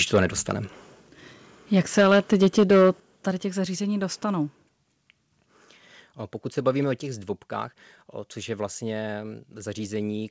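From 0.14 to 0.51 s and again from 1.77 to 2.9 s the loudest syllables crackle harshly, likely from microphone overload: the peaks ran about 5 dB, then about 8 dB, past the converter's limit, flattening a small share of samples (a few percent, more in the second stretch). Unlike plain loudness, the distortion rides only on the peaks.

The level then falls in clean, instant steps at 2.01 s (about 2 dB), 3.0 s (about 7 dB, just before "tady těch zařízení") and 7.02 s (about 4 dB, between "se bavíme o" and "zdvobkách což je vlastně"). This is likely the microphone volume being stepped down. Voice and background drop together without the crackle of clipping, and the first step falls inside the second overload.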